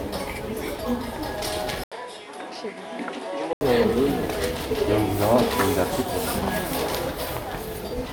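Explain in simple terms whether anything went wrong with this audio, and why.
From 1.84 to 3.61 s the audio turns duller and quieter after a brief gap, likely an input switched to a poorer device. Its new background hiss and missing top above 11.4 kHz set it apart from simple filtering.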